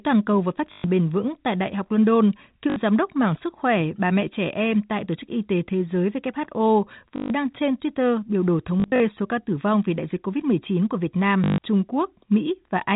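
Packet loss with last packet repeated occurs at 0.72 s (after "cầu và phát"), 2.7, 7.16, 8.8 to 9.0 (scattered) and 11.44 s, lasting 60 to 140 ms. Repeated packets, which fit 20 ms packets, buzz robotically at 50 Hz, appearing as identical waveform blocks on a waveform display.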